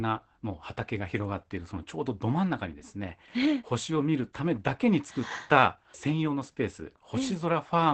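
Throughout, low-rate Opus voice compression in SILK mode, consistent with 12 kbps, removes everything above 8.7 kHz and coarsens the excitation, leaving speech muffled, hoarse and slightly robotic.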